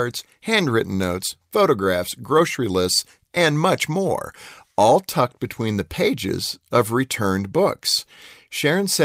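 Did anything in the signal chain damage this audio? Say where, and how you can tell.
No, nothing along the chain seems to have harmed this speech recording, and there's nothing to point to at any stage.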